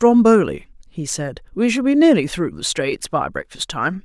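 A short speech recording with no technical faults to point out. Nothing in it calls for a time or a cause.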